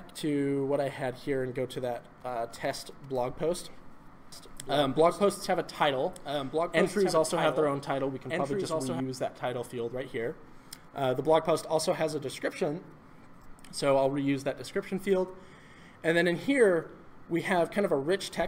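Doubled audio track, 4.32 to 9.00 s: a dry copy, about 5 dB quieter, trails roughly 1.5 s behind, likely from a slower second capture path.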